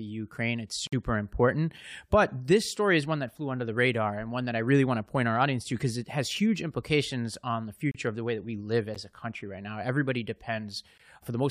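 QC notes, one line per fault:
0.87–0.93 s, 7.91–7.95 s, 8.95 s and 10.98 s: gap between stream segments. Hard-edged holes of silence of 54, 33, 12 and 17 ms, where the timestamps of back-to-back 1 s segments don't quite meet and the player pads with silence. Nothing's cut; the clip just stalls briefly.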